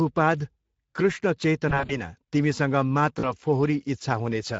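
The whole clip carries Speex codec damage, a hoarse, noisy edge to the speech that fits a mid-rate setting around 17 kbps. At 1.69 to 1.98 s, VoIP packet loss concealed by the speech codec stretches the voice into a fading buzzy tone or coloured noise. About 100 ms is lost over roughly 200 ms, with gaps up to 40 ms. The same thing happens briefly at 3.19 to 3.32 s.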